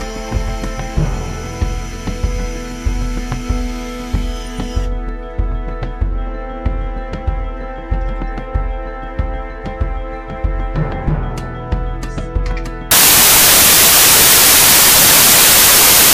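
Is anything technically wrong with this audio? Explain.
Yes. From 12.91 s to the end at 16.13 s, the samples are built from the wrong bytes: the decoder assembles each value with its bytes misaligned or swapped, so the rapidly fluctuating low-order bits land in the most significant position. The result is that the final stretch turns into loud, harsh broadband noise.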